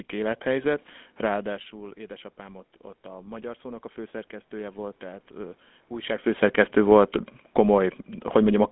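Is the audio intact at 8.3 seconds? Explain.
No. At 8.3 s the speech is still carrying the GSM full-rate codec damage that runs through the whole clip. The codec rebuilds the voice from a vocal-tract model driven by sparse, evenly spaced pulses, so the sound has a plainly audible buzzy, gravelly roughness, consistent with a 13 kbps full-rate stream. On a spectrogram, energy stops abruptly near 3.8 kHz with an empty band above, and the lows thin out below about 200 Hz.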